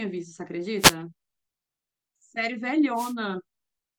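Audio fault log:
0.78–0.95 s and 2.94–3.14 s, wireless microphone noise hit: two short bursts of hissing static, each under a quarter second, swish over the speech. The FM radio link fades as reflected signals cancel, so receiver noise surges up.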